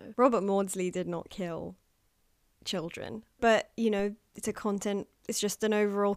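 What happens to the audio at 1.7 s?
Nothing goes wrong at 1.7 s; the speech passes through that moment intact, with no dropout, click, distortion or other fault to be heard.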